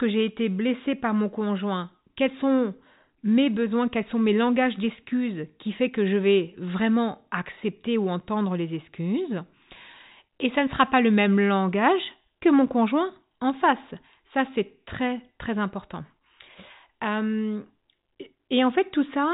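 Nothing stood out on listening to this speech recording, which carries the narrow sound of G.711 telephone coding, with nothing above 3.8 kHz.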